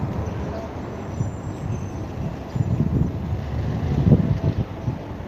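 No technical faults can be heard anywhere in this sound.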